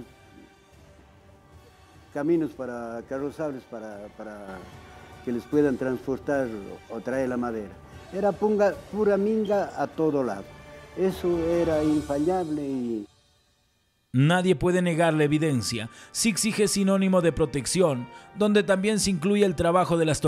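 At 4.48 s the whole sound, background noise included, jumps up by about 6 dB in a single step and stays at that louder level to the end. This is a sudden gain jump, likely caused by a digital gain setting being applied instantly rather than ramped.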